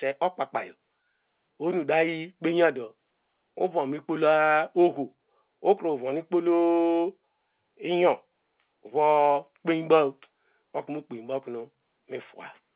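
Speech over A-law G.711 telephone coding at 8 kHz, with the 4 kHz band limit that path imposes and no technical faults present.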